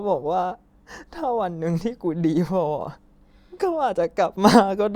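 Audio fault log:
No faults to log in this speech clip.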